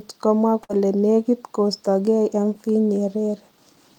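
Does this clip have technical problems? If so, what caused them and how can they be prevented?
Yes. There is a burst of packet loss from 0.63 to 0.71 s. A short run of packets never arrived in time to be played. The receiver filled the gap by stretching the last speech sound for about 55 ms, fading it as it went. That gives a brief stretched, fading sound in place of real speech. When the audio returns, about 60 ms of speech has been skipped. A larger jitter buffer and forward error correction would help prevent this.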